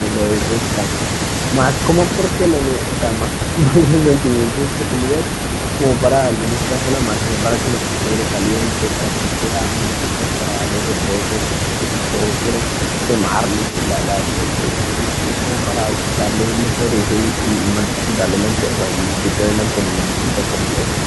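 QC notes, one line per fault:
Throughout, echo leak: a delayed copy of the speech trails the talker by 336 ms, sitting roughly 15 dB under the direct voice. Most likely a far-end loudspeaker whose echo canceller let some of its mic pickup slip back down the line.
3.56 to 3.61 s, speech suppressed in double talk: the voice briefly dips, only about 5 dB at the deepest, over roughly 50 ms. That's likely the echo canceller hearing both sides at once, failing to tell talker from echo, and ducking both.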